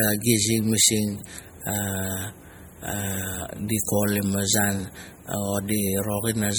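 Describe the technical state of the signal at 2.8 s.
At 2.8 s the speech carries MP3 compression damage, as it does for the whole clip. The damage is plainly audible. It sounds watery and swirly, with metallic chirps on s sounds and softened attacks. This is likely MP3 coding at a low bitrate, around 48 kbps. Short of bits, the encoder drops weak frequency lines. Those lines flicker on and off between frames, which creates the swirl. Nothing is present above 21 kHz.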